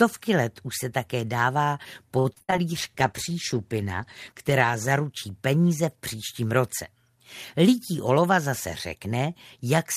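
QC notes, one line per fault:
2.19–2.54 s, repeated packet loss (robotic sound). Five short holes open in the stream within about a third of a second. The longest lasts 64 ms. Each hole is covered by stretching the last bit of sound forward, so about half of this span is patched audio rather than the real signal. Those repeated copies give a choppy texture. The lost pieces leave small audible dropouts.
2.71–4.96 s, call bitrate drop. The sound turns coarse and loses its top end. It sounds rough and somewhat watery, with dull, muffled highs. This fits the encoder being pushed from about 40 kbps down to 15 kbps after the bandwidth estimate fell. It stays at that low rate for about 2.2 s. With so few bits, detail is quantised roughly and high frequencies are dropped until the rate climbs back.
8.09–8.47 s, jitter buffer speed-up. The audio briefly plays about 8 percent fast while the pitch stays the same. 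The receiver is trimming excess delay from its buffer. It cuts out tiny slices, each one or a few pitch cycles long, again and again. Around 40 ms is removed in total. The result is a short, slightly hurried stretch.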